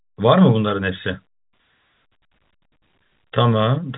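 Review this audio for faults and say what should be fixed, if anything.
Nothing here needs fixing: the speech comes through the G.711 telephone coding path as that format should, with its content held below 4 kHz and any quantisation hiss faint beneath the signal.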